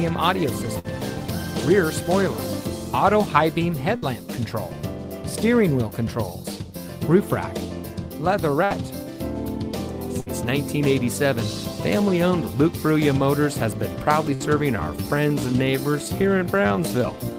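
Bursts of packet loss at 0.79, 3.96, 8.64, 10.20 and 14.34 s: each gap is bridged by a fading continuation of about 60 ms, then about 60 ms of audio is skipped. From 14.68 s to the end, the pace drops to roughly 0.74 times normal with unchanged pitch, so the audio drags, likely a time-stretched section.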